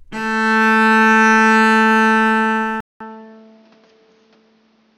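At 2.80 s the recording likely switched its input to a poorer device. After a 200 ms silence, the sound continues at about the same level but duller, with nothing above 6.6 kHz and faint new background noise, until the end.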